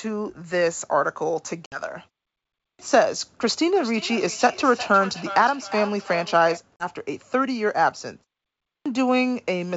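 Speech over a wideband call, with packet loss on an ADPCM call at 1.66 s and 6.76 s. About 60 ms and then 40 ms of audio vanish, apparently a few packets each time. The waveform shows flat, hard-edged gaps and the spectrogram shows full-band blank columns. Right after each gap the decoder's predictor and step size no longer match the sender's, so the sound returns slightly distorted before settling. A clipped start after a pause hits at 2.67 s, following about 0.66 s of silence, and at 8.73 s, following about 0.57 s. Each time, roughly 120 ms of onset is swallowed while the output device wakes, so the waveform jumps from nothing straight into speech and the spectrogram lacks the soft leading edge. Between 3.61 s and 6.62 s there is feedback echo between two devices. One device replays the other's microphone, which recaptures it, and each device's echo canceller ignores the other's playback. 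Each phrase returns around 400 ms later at up to about 13 dB below the speech, thinner and more ringing each time. On a spectrogram these appear as fainter, evenly spaced copies of each burst, and on the waveform as trailing echo trains. Muted pauses and the G.722 wideband coding, audible as clear band extension toward 7 kHz, are not faults here.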